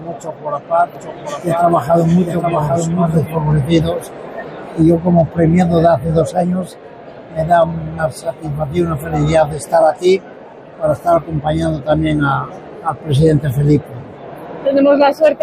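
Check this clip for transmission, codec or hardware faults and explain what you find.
One fault is present: a doubled audio track from 0.95 to 3.35 s. A second capture path running late, or an edit holding two out-of-step copies, is the likely cause. A full-band copy trails the original by around 0.7 s, roughly 5 dB quieter, with no decay or room colour, and it starts and stops abruptly.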